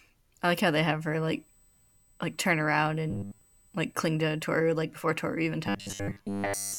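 From 3.10 to 3.41 s and again from 5.67 to 6.79 s, the speech turns into a rigid metallic buzz at 100 Hz. This is robotic sound from repeated short buffers. The likely cause is a 10 ms chunk replayed in place of most of the real audio.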